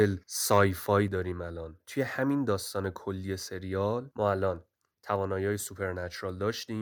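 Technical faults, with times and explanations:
0.51–0.64 s, microphone overload: the loudest peaks are flattened and crackle harshly. The input likely ran about 3 dB past the converter's limit, clipping a small share of samples.
1.08 s, microphone volume stepped down: voice and background drop together by about 4 dB at once. Software likely lowered the input volume after the earlier clipping.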